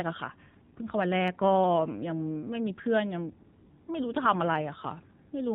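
From start to finish the speech runs through an AMR narrowband mobile codec, with plainly audible damage. Everything above 4 kHz is gone, and the low-bit vocal-tract model leaves the voice buzzy and synthetic, which fits a low AMR-NB mode around 7.4 kbps.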